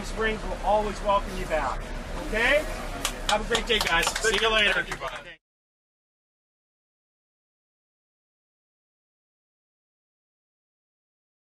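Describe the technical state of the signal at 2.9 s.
At 2.9 s there is a corrupt frame decoded, running from 2.88 s to 2.91 s, roughly 38 ms, consistent with a single damaged frame. Flipped bits in the compressed data were not caught, so the decoder rebuilt the frame from misread gains and codes and placed energy at frequencies where it does not belong. The result is a brief, foreign chirp, squeak, blip or burst of noise, with the error peaking at around -30 dBFS.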